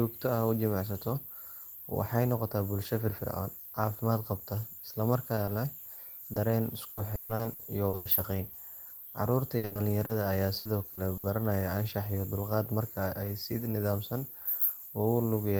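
Two brief smears, at 5.35–5.39 s and 5.45–5.49 s, each blur about 20 ms of speech. This is short concealed packet loss: audio arrived too late for the decoder, and the receiver bridged each hole by extending the preceding sound.

From 6.33 to 8.19 s the speech turns choppy and robotic, with nine dropouts patched over about 520 ms, roughly 28% of the stretch, and the longest at 140 ms. This is repeated packet loss, where fresh gaps keep arriving before concealment recovers.

Another single smear at 8.89 s is another short concealed packet loss.

The same robotic chopping returns at 9.57–11.25 s. This repeated packet loss has seven gaps filling about 340 ms, about 20%, none longer than 60 ms.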